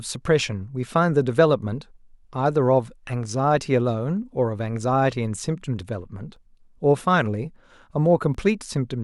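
At 6.36 s and again at 8.35 s the speech gives a tiny skip. This is overlap between stream segments: the time stamps of adjacent 2-second segments overlapped, so 8 ms and 19 ms of real audio were trimmed away and the waveform jumps.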